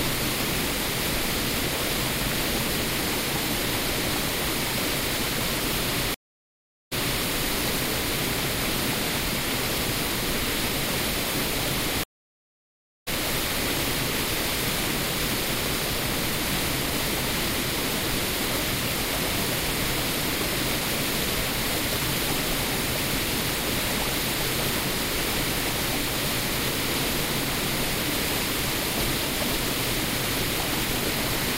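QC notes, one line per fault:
6.14–7.24 s and 12.04–13.09 s, stream reconnect: the sound drops out for 772 ms, then picks up 320 ms earlier, replaying a bit. The second time it's silent for about 1.03 s and comes back roughly 0.7 s further on, skipping ahead. Each time the connection broke and a fresh decoder started mid-stream.
8.82, 14.19 and 29.12 s, audio missing between chunks: quick skips where a tiny slice, around 20 ms, vanishes and the two sides butt straight together with no silence. That points to a likely cause of 5 s processing chunks losing a sliver at each handover.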